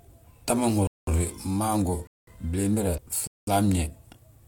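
Speech with three silent holes of 200 ms each, at 0.87–1.07 s, 2.07–2.27 s and 3.27–3.47 s. This is a gap between chunks: the audio arrives in 1.0 s chunks and silence is left at each join. The spacing is regular and the holes are clean, with nothing dropped, which sets them apart from a corruption skip. At 2.94–2.99 s a brief disturbance marks damaged data in a compressed stream. The decoder misreads bad frames and resyncs, so unlike the gaps this one is isolated.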